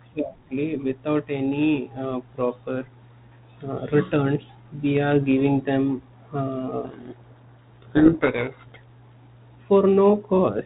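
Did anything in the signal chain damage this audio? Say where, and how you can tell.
Yes, at the codec stage. From 6.84 s to 8.76 s the speech sinks under harsh, grinding distortion, then comes back clean. That is a codec payload misread. The decoder took the G.726 code words with their bits in reverse order. Each frame still decoded as valid ADPCM, but the difference values and the adaptive prediction went wrong, so the speech was buried in harsh distortion. Outside that stretch the G.726 link sounds like ordinary 32 kbit/s telephone audio.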